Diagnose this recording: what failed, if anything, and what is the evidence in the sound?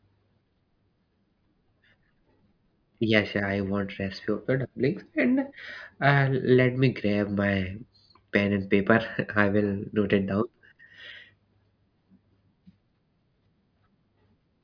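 Nothing failed; the recording shows no audible fault.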